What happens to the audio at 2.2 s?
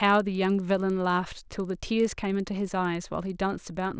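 A resampler restarted on every block is active at 2.2 s, as it is across the whole clip. Each 50 ms block is converted from 48 kHz to 16 kHz in isolation, so every block edge carries a small error, heard as ticks repeating at 20 Hz under the speech.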